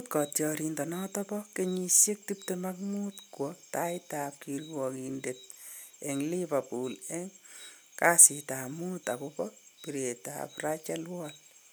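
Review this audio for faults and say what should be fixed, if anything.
Nothing to fix: no faults can be heard anywhere in this speech recording.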